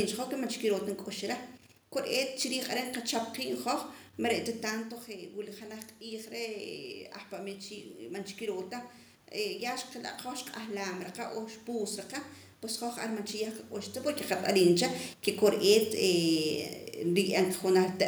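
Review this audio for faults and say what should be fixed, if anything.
From 4.75 to 8.99 s there's automatic gain rising: right after the talker moves back around 4.5 s, the level drops about 10 dB, and the AGC slowly climbs about 5 dB, so voice and room noise swell up together. Fix it by slowing or capping the AGC, or setting fixed gain with steadier mic placement.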